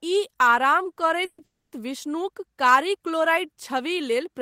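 At 1.25 s the speech stalls for about 130 ms: the last sound is stretched into a fading buzz that drops to near silence for roughly 50 ms before speech resumes exactly where it broke off. A second, longer call audio freeze follows at 1.44 s, lasting about 280 ms to 1.74 s, most of it (about 250 ms) silent. Nothing is lost; the speech is pushed later each time. The likely cause is delayed packets draining the jitter buffer.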